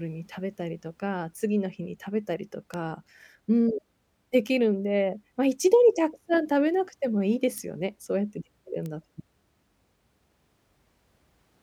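Three sharp, isolated ticks cut through the speech at 2.74 s, 7.58 s and 8.86 s, reaching about −19, −13 and −19 dBFS. Each is a bit error spike: a flipped bit throws one to three samples off by a power of two, producing broadband clicks unrelated to the signal.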